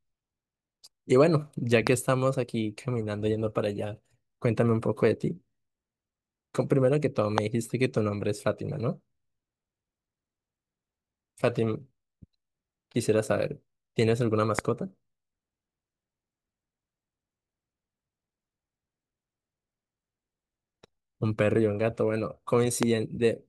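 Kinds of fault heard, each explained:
Loud pop: four single sharp pops hit the speech at about 1.87, 7.38, 14.59 and 22.83 s, each a brief spike roughly 20 dB above it while the speech carries on underneath, likely from a sudden voltage pulse such as a plug, switch or static.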